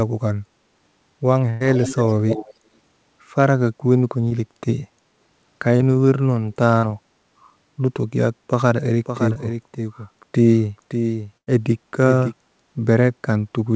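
Speech passed through a call path whose spectrum stops at 8 kHz, which fits a wideband codec such as G.722, and it carries several faults. Bursts of packet loss at 1.50–1.62 s, 6.78–6.85 s and 11.38–11.49 s each drop about 60 to 100 ms of audio. The receiver fills the gap by stretching and fading the last sound into a held buzz or hiss, then resumes later on. On a spectrogram these show as smeared, repeated harmonic bands that fade before an abrupt restart. Shorter concealed packet losses at 4.28–4.32 s, 5.76–5.82 s and 9.33–9.38 s replace 20 to 40 ms with a continuation of the last sound. They are heard as brief smears or wobbles, and appear as narrow blurred slivers with slightly softened onsets in the waveform. From 1.74 to 2.55 s an echo leak adds a copy of the speech 215 ms late at about 10 dB down, likely from a loudspeaker echo one side's canceller failed to remove. It shows as faint, delayed shadows of the main formant pattern. 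From 9.05 to 12.33 s a doubled audio track runs roughly half a second behind and around 10 dB quieter, with no decay or room colour, and it cuts in and out abruptly. The likely cause is a second, slower capture path, and on a spectrogram it appears as a full-band, offset replica of the speech.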